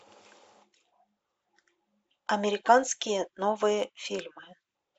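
Listening to this short speech recording, nothing stood out as a technical problem at any point.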